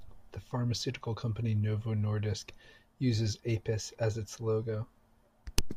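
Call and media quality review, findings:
Sample clock jitter, throughout the clip: faint hiss and roughness riding on the speech, strongest on loud and sibilant passages, absent in pauses. Probable component: converter clock. Timing wander under a microsecond puts slope-dependent error roughly 45 dB below the signal.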